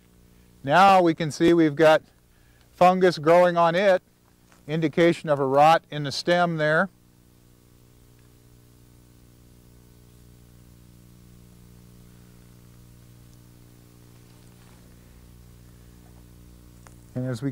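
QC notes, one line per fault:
1.48 s and 3.97 s: dropped buffer (overrun). Each is a tiny forward jump in the sound, no gap of silence. Likely cause: samples were overwritten before being read, losing a millisecond or two and butting the edges together.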